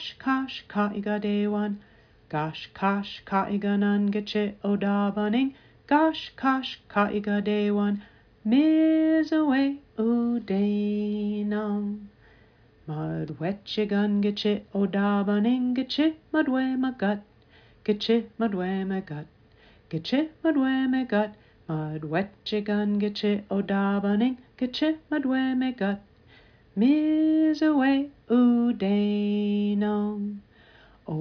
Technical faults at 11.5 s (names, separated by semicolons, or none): none